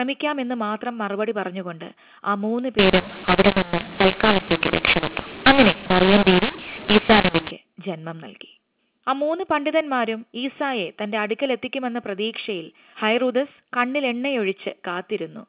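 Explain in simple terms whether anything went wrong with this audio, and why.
Something did go wrong, from 2.79 to 7.51 seconds. This is a mix-up between mu-law and A-law. The speech was stored in A-law telephone coding but read back as mu-law, its close cousin. Each level gets the wrong value. Some parts jump too loud, others shrink, and quiet moments fill with hiss. The speech turns harsh and gritty. Outside that stretch, the telephone coding sounds as it should, with its narrow phone-line tone.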